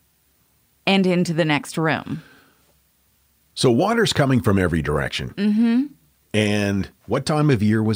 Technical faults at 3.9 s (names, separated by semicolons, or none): none